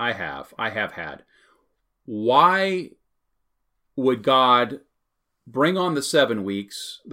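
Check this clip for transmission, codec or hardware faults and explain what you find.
Nothing wrong turns up here; the speech comes across steady and intact the whole way, with no sign of trouble from the transmission path, the codec or the hardware.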